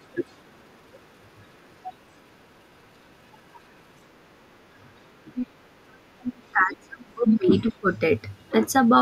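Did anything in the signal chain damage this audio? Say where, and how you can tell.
Yes. In call processing, the echo canceller likely left part of the loudspeaker signal in the microphone path, so the other side's voice leaks through: a faint scrap at 0.29–0.33 s far below the talker, then louder bursts at 5.34–5.47 s and 6.2–6.3 s.

Also in call processing, both sides talking at once likely made the canceller unable to separate talker from echo, so it turned everything down. This speech suppressed in double talk runs from 6.31 to 7.91 s. The voice sinks by up to about 30 dB.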